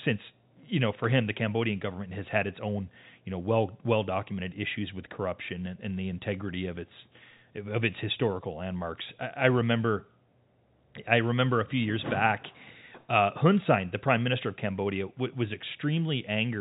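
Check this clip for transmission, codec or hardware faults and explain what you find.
Nothing stood out on listening to this speech recording, which has the narrow, telephone-band sound of G.711 coding.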